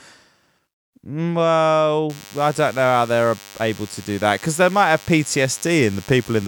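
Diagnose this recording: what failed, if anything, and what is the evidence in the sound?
DECT cordless phone buzz enters at the analogue stage from 2.09 s and runs to the end. A thin, steady 100 Hz buzz with dense harmonics sits around 25 dB below the speech. A nearby DECT transmitter bursts every 10 ms, and the audio circuitry rectifies it.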